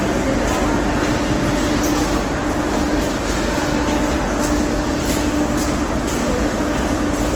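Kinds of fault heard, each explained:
Opus compression: The audio was likely squeezed through the Opus codec in its music mode at a low rate, the damage pointing to something near 16 kbps. With too few bits, the encoder keeps each band's overall energy but refills the detail with folded copies of lower bands or with noise. Here that is plainly audible throughout as grainy, rough texture where tones should be clean, though the bandwidth stays full, reaching about 20.2 kHz.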